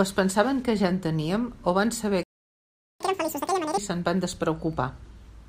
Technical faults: playback stall; catch-up at higher speed

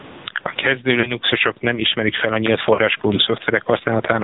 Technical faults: gain pumping; AMR narrowband mobile codec; lost AMR speech frames

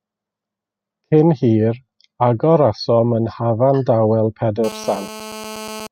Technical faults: GSM phone buzz

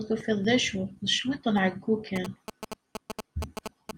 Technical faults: GSM signalling bursts

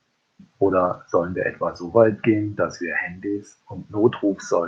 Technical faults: lost packet rebuilt from error correction

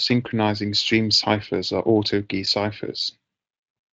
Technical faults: none

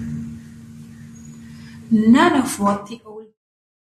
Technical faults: none

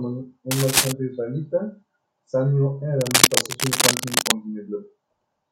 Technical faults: cable scratch noise

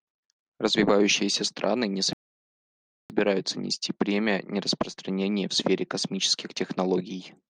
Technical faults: rebuffering stall

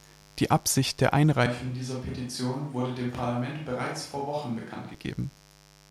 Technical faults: mains buzz; switch to a distant microphone

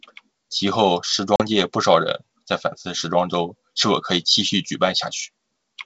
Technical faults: packet loss on an ADPCM call

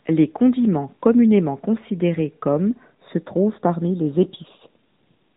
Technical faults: AMR narrowband mobile codec

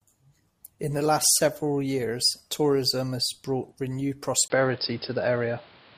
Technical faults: input switched to a poorer device

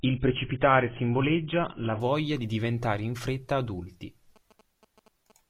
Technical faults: adaptive stream starting at a low bitrate; GSM signalling bursts

